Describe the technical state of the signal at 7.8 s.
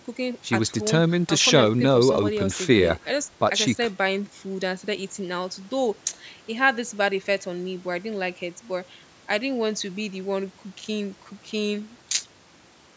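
At 7.8 s the speech is intact, with no fault audible, only the expected call microphone processing, whose high-pass filter trims the lowest bass and which leaves nothing above 8 kHz.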